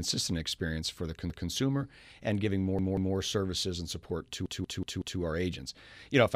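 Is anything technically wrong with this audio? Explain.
Yes. After "experience for the" (1.3 to 1.49 s), after "and giving" (2.79 to 3.16 s) and after "services and support" (4.46 to 5.2 s), a chunk of about 186 ms stutters, playing one, two, then four extra times with hard joins. This is a repeated buffer: when new audio arrived late, the device replayed its last buffer, which fits an 8192-sample buffer. Nothing seems lost.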